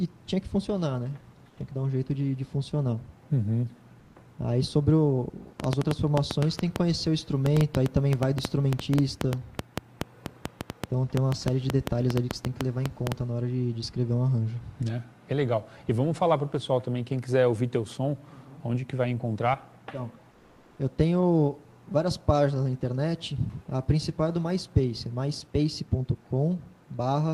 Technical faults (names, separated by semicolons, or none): train of clicks; comfort noise in place of the background